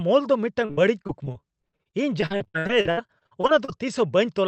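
Speech carried over a call link shows repeated packet loss (robotic sound) from 0.65 s to 3.79 s. Over that stretch the stream drops out again and again, roughly 28 short holes, the longest about 64 ms. Each is patched by stretching the preceding sound, so about a quarter of the span is synthetic fill. The result is choppy, with pieces missing. A spectrogram shows smeared, frozen harmonic bands and abrupt breaks under a ceiling near 8 kHz, which fits the Opus call codec.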